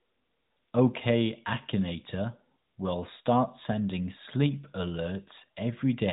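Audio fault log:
No faults heard in this speech clip.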